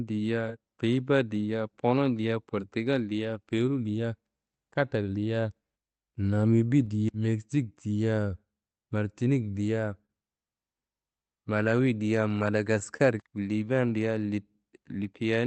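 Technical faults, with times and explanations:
Throughout: clock drift between sender and receiver. The sender's audio clock runs roughly 3 percent slower than the receiver's, so the jitter buffer keeps draining and the receiver has to make up the shortfall as it plays. The result is a faint, recurring unsteadiness in timing across the whole speech clip rather than one clear break. The sound is already limited to about 8 kHz by the Opus call path, whose coding noise fits a bitrate near 32 kbps.
0.16 to 15.37 s: repeated timing corrections. To keep pace with the slower sender, the receiver repeatedly repeats tiny slices of the signal, all in the same direction but unevenly spaced. Together they add around 0.4 s, so the speech plays at about 98 percent speed. Each repeat is small. The effect is a slightly dragging, uneven tempo with the odd soft hiccup, not distinct glitches.
10.06 to 10.10 s: short stall from a late packet. 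A packet arrived late, the jitter buffer ran dry, and the receiver held the last sound for 29 ms until the data came in. It then carried on from the same point, so nothing is lost. The listener hears a sound briefly sustained too long, with a slight buzzy or dipped texture, and everything after it sits 29 ms later.
12.39 to 13.01 s: scattered short gaps. Around three packets went missing or arrived late, one at a time across this stretch. The receiver bridged each gap by extending the preceding sound, roughly 50 ms in total, with the longest patch near 30 ms. No speech is actually dropped. Small ticks, smeared edges or little hiccups appear in an otherwise continuous stretch, covering a few percent of it.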